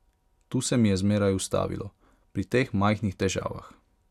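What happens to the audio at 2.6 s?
Nothing goes wrong at 2.6 s; the speech continues intact through that moment.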